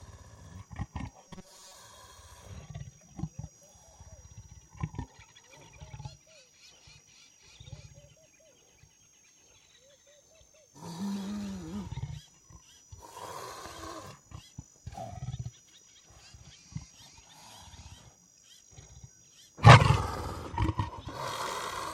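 From 1.23 to 1.77 s the audio turns into robotic sound from repeated short buffers: a rigid metallic buzz at 188 Hz, from a looped 5.3 ms slice replacing about half the material, likely due to late-arriving data. Unlike a dropout, nothing falls silent.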